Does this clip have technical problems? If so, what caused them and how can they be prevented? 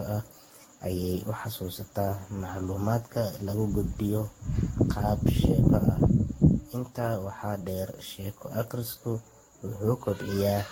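Yes: generation loss throughout, likely from roughly ten lossy passes near 60 kbit/s, leaves the speech swirly, hollow and smeared, with blurred attacks and nothing above 16.6 kHz. Prevent it by keeping a lossless master and encoding only once.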